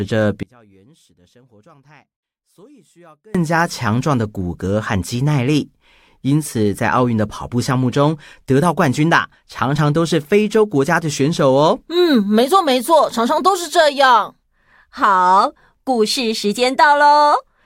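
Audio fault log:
0.43–3.35 s: one channel inverted. Speech falls by about 31 dB to a faint residue, likely because one channel's reversed polarity cancels the shared centre in mono.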